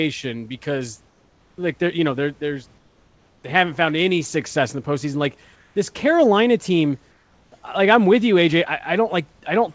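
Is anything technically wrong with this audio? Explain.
Yes. In four pauses the room background turns into a flat, featureless hiss about 1 to 3 dB quieter, sitting roughly 40 dB below the speech: 1.08–1.58 s just before "like they're you know"; 2.78–3.44 s between "you know they're there's" and "they haven't found any"; 5.56–5.76 s; and 7.12–7.52 s before "like I'm with you." This is comfort noise in place of the background. The likely cause is discontinuous transmission: the sender stopped sending during silence, and the receiver filled each gap with synthetic noise approximating the room's spectrum.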